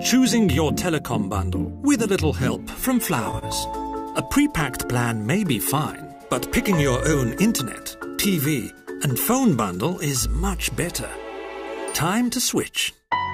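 At 3.39 s there is a short stall from a late packet. It lasts until about 3.45 s. A packet arrived after it was due, and the jitter buffer ran dry. The receiver held the last bit of sound for about 29 ms to cover the gap. Then it carried on from exactly where it stopped. Nothing is lost. The sound just lingers a moment too long, with a slight buzz or dip. Everything after it runs 29 ms later.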